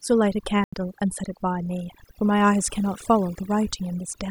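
Overdone noise removal runs through the whole speech clip: the suppressor is pushed so hard that bands near its noise estimate are cut away along with quieter speech detail, leaving a near-silent background with twinkling specks. At 0.64 s a block of digital silence drops in, about 85 ms long, which fits a 4096-sample buffer not filled in time. Audio cuts hard to silence and back at 0.73 s.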